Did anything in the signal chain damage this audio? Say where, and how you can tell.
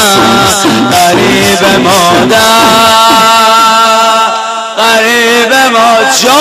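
Yes. Hard clipping runs through the whole clip: the signal was driven about 4 dB past what a gain stage, converter or fixed-point format could pass, so only the loudest few percent of samples are cut flat, heard as crackle on peaks.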